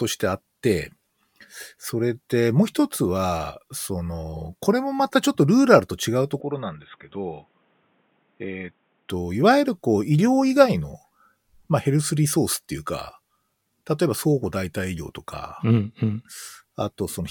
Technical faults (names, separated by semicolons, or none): input switched to a poorer device